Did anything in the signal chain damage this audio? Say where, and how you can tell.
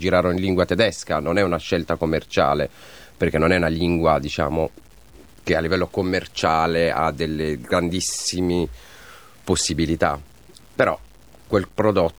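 Yes. The sample-format conversion stage is the likely culprit: the speech appears to have been reduced to about 8 bits by plain truncation, with no dither, giving low bit depth without dither across the whole clip. Because the rounding error tracks the waveform, the result is a grainy distortion that moves with the voice, sitting roughly 35 dB below it. Quiet syllables and decaying word endings turn gritty and sputter between the coarse steps.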